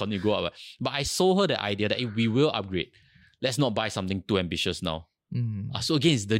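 No technical faults can be heard anywhere in this speech recording.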